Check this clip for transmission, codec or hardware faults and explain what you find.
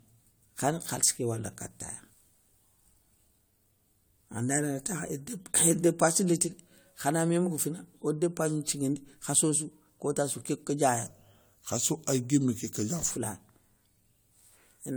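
Two faults stand out: one colours the whole clip, the other affects a short stretch near the end.

Generation loss runs through the entire clip. The speech sounds swirly and hollow, consonant attacks are softened and smeared, and there is a watery, phasey texture that the bitrate alone wouldn't account for, with no content above 20 kHz. This likely comes from repeated lossy coding, about three passes through an AAC-LC encoder at a rate that fits 96 kbit/s. Each decode and re-encode quantises the signal on a fresh frame grid, so the artefacts pile up.

A section at the wrong speed runs from 11.06 s to 13.11 s. The speech there turns slow and deep, dropping roughly three semitones while its pacing drags, and both shifts come and go abruptly at the edges of that stretch. The likely cause is that this passage was played back at 0.86 times its recorded speed, as happens when audio is fitted to the wrong clock. 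Because speed and pitch are tied together, both fall at once.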